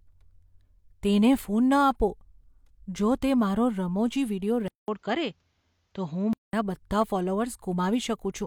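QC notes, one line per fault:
4.68–6.53 s, input switched to a poorer device: after a 200 ms silence the speech turns dull and boxy, with nothing above 7.6 kHz, a faint new noise floor about 50 dB down and no real level change, then clears again. This is likely a switch to a narrower-band microphone and back.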